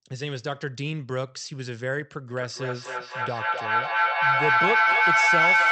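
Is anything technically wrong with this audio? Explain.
Yes. From 2.29 s to the end there is feedback echo between two devices. A second device in the room plays the call back, the first device's microphone recaptures it, and neither echo canceller removes the other device's output. Repeats recur roughly every 0.3 s, each thinner and more ringing, and pile up to about 9 dB above the speech instead of decaying.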